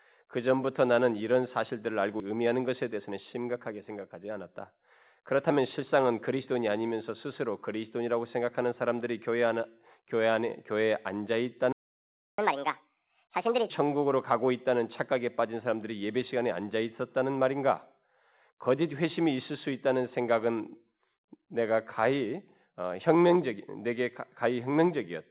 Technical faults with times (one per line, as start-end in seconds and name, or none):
2.20-2.22 skip ahead
2.30-5.99 jitter buffer speed-up
11.73-12.38 playback stall
12.38-13.70 catch-up at higher speed